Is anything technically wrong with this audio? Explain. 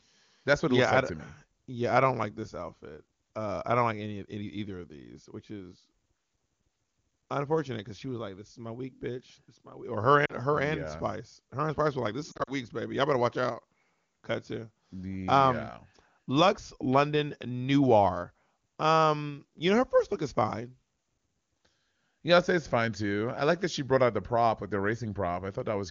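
Yes, lost AMR speech frames. At 10.25 to 10.34 s, just before "her and", about 40 ms drops out, which fits two missing 20 ms frames. From 12.31 to 12.52 s, gaps of up to 40 ms are scattered across roughly 160 ms. Each time, the decoder stretches its last good pitch and vocal tract settings with falling gain. The result is a short warble and dip, followed by a moment of rough return. On a spectrogram, the harmonics flatten into smeared horizontal bands. On a waveform, the amplitude briefly sags.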